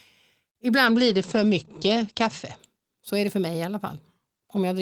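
From 0.86 to 2.65 s, a call bitrate drop starves the encoder. Bandwidth narrows from 20 kHz to 8 kHz, and the speech turns watery, not just muffled.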